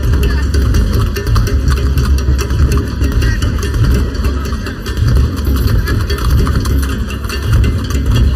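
The whole clip sounds hollow and phasey from start to finish. That is channel delay causing comb filtering. One channel lags the other by roughly 0.7 ms before the two are summed to mono. Cancellation carves fixed notches, the first near 700 Hz.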